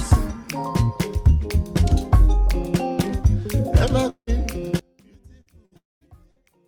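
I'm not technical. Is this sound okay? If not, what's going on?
No, there are a few problems worth knowing about.

At 3.24 s there's a block of digital silence: for a couple of milliseconds the sound drops to complete nothing and jumps straight back, with no fade. That abrupt cut comes across as a quick tick or click.

Between 4.09 and 4.30 s, and again between 5.77 and 6.04 s, you hear what is likely a long network dropout. The last bit of sound gets smeared into a fading buzz or hiss, then there's a moment of near-silence. When the audio comes back, roughly a fifth to a quarter of a second has simply gone missing.

From 4.79 s to the end, the sound nearly disappears and leaves only a faint trace. The likely cause is one channel inverted: one side is flipped upside down, so the two sides cancel each other when combined.

There are also three shorter hiccups, each a burst of packet loss: at 5.41–5.55 s, 5.65–5.74 s and 6.31–6.51 s. 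In each one, about 60 ms of audio drops out and is papered over with a brief held buzz or fading hiss before things pick up again.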